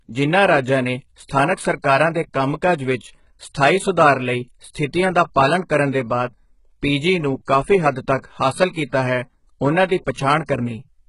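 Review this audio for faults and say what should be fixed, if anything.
Heavy HE-AAC compression damage runs through the whole clip. Nothing comes through above 11.1 kHz, and the treble that is there sounds synthetic, with s sounds gritty and lispy. That's likely spectral band replication rebuilding the highs at a very low bitrate, somewhere near 12 kbps. To prevent it, encode at a much higher bitrate or with a full-band codec.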